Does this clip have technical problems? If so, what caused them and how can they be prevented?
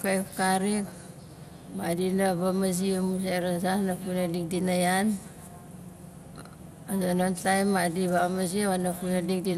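Yes. Throughout the speech there is audible MP2 compression damage: the sound is dull, with a gurgling, granular texture, and nothing is present above about 15.7 kHz. This likely comes from MPEG Layer II coding at a low rate, consistent with roughly 80 kbps, where too few bits are shared among the 32 sub-bands, so upper bands switch in and out and the remaining ones are coarsely quantised. To prevent it, encode at a higher bitrate or use a more efficient codec.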